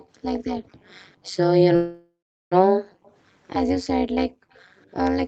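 Throughout the clip, an overlap-add ripple makes the level pump around 200 Hz, up to about 60 dB deep, so the sound has a metallic buzz with extra tones around each note. The frames were rejoined with an overlap that does not sum to constant gain. A waveform shows a dense, regular comb of amplitude dips, and a spectrogram shows fine vertical striping.

From 0.00 to 0.07 s and again from 0.64 to 0.68 s, a faint echo leak appears. It is a delayed copy trailing by 214 ms, at about 35 dB and then about 40 dB below the main signal. This is likely loudspeaker pickup that the far side's echo canceller left behind. On a spectrogram it shows as a weak, shifted ghost of earlier energy.

From 1.75 to 2.54 s, a call audio freeze occurs. The last sound is stretched out and fades, then about 380 ms of silence follows, and the audio resumes where it stopped. This is likely a jitter buffer running empty. 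It inserts a 760 ms gap without losing anything. On a spectrogram, smeared, flat bands fade into blankness.

From 2.74 to 3.04 s and from 4.33 to 4.53 s, the background is gated by the echo canceller. The room sound is pulled down by as much as about 40 dB, which shows as a sudden trough in the noise floor. Each dip is followed by another echo leak, at 3.04 to 3.12 s and at 4.53 to 4.62 s. These copies lag by 229 ms at about 35 dB down.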